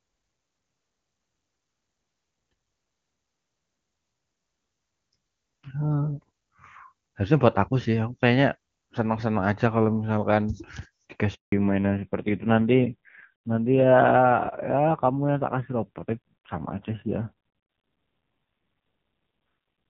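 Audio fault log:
11.34–11.52 s handover gap: speech fades within a few tens of milliseconds into 180 ms of clean silence as the call switches networks; unlike a random dropout, the sound quality changes afterwards.
11.52 s to end fallback to narrowband: everything above 4 kHz vanishes and speech turns dull and raspy, which points to a low-rate narrowband codec replacing HD Voice rather than simple filtering.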